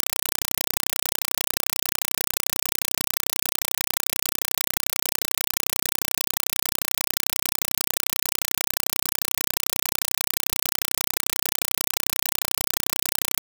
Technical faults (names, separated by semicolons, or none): compressed stream played as audio